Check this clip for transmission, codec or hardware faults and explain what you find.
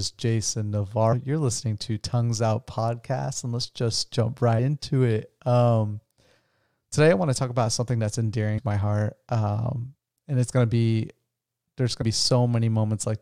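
Damaged data in a compressed stream shows up four times in this speech clip, at 1.12–1.14 s, 4.58 s, 8.57–8.59 s and 12.01–12.03 s. Corrupted bytes leave the decoder unable to parse those frames, so it loses sync and hunts for the next valid frame header. Each event is a brief chirp or blip of garbled sound, 20 ms or shorter.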